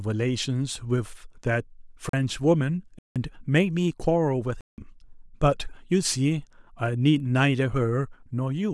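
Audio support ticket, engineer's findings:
Hard cuts: 40 ms hole at 2.09 s, 170 ms dropouts at 2.99–3.16 s and 4.61–4.78 s. Block of digital silence, likely output buffer underrun; 170 ms gaps are 4096-sample blocks.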